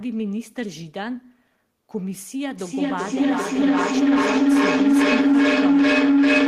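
A loop from loudspeaker back into microphone is adding gain on each trip, so from 2.59 s the repeats grow rather than decay, producing a feedback howl. The loop narrows the sound to a tone of around 300 Hz, pulsing roughly every 400 ms, the loop's round-trip delay. It swells to about 11 dB above the speech and is never broken, still sounding when the clip ends.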